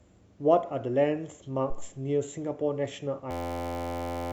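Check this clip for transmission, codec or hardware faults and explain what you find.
There is one hardware fault, a system hang loop. From 3.31 s to 4.32 s, the system stalled while the sound device kept replaying its last buffer. An 11.61 ms slice, which fits a 512-sample buffer, repeats at 86.1 Hz. It sounds like a steady buzz, and about a second of speech is lost.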